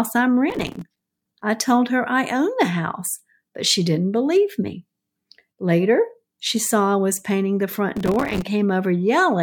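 The processor fell behind its audio deadlines twice, leaving a burst of processor overload crackle each time. From 0.50 to 1.43 s, just before "I told her I", dozens of buffers of a few milliseconds each went unfinished and were filled with silence, so the speech is shot through with tiny hard-edged dropouts that sound like gritty tearing. The same crackle returns from 7.97 to 8.42 s, right after "I was painting the", then stops.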